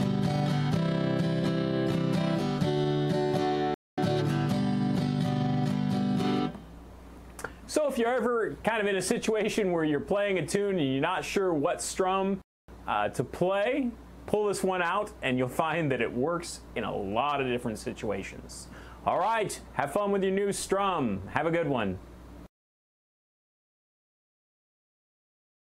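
The player most likely ran short of data or had its thread held up, producing a playback stall twice. At 3.74 s the output drops to silence for about 234 ms, resuming at 3.98 s; at 12.42 s it happens again for about 267 ms, picking up at 12.68 s. Each time the sound cuts off abruptly in mid-flow, leaving a clean gap of dead air before continuing.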